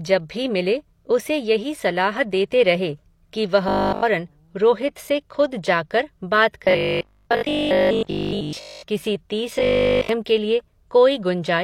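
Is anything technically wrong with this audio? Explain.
Yes. There is robotic sound from repeated short buffers in this speech at 3.69–4.05 s (after "रहे कि", before "रोहित से खुद जाकर"), 6.65–8.83 s (after "से खुद जाकर बात") and 9.59–10.09 s (before "के लिए"). The likely cause is audio arriving too seldom, so a roughly 20 ms buffer is looped. That forces a rigid, metallic 50 Hz buzz: throughout the first and last spans, and over most of the middle one.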